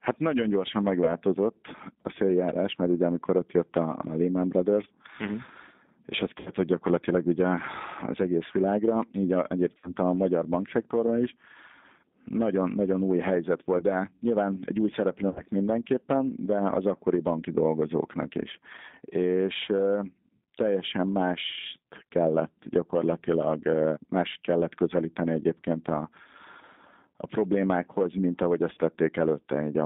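The whole clip carries plainly audible G.729 codec damage. Nothing gets through outside roughly 150 Hz to 3.7 kHz, so the speech sounds boxed-in and telephone-narrow. At 8 kbit/s the decoder rebuilds each 10 ms frame from a vocal-tract filter, a pitch predictor and a few pulses, and that sparse excitation leaves the voice a bit rough and synthetic.

On top of that there are seven dropouts from VoIP packet loss concealed by the speech codec. The first is at 1.05–1.13 s, just after "nagyon gyorsan". The others fall at 6.38–6.50 s, 9.77–9.94 s, 13.78–13.84 s and 15.30–15.41 s. Two more come at 25.61 s after "más kellett közelíteni" and at 28.74–28.79 s after "a problémákhoz mint ahogy". In each gap the decoder keeps replaying its last pitch and filter at falling gain, so the sound smears into a brief buzzy tone or coloured noise that fades. The longer holes, around 6.4, 9.8 and 15.3 s, drag the most. 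Recovery also lags for tens of milliseconds or more after each one, because every frame leans on the one before.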